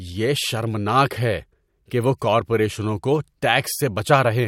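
No technical faults are audible.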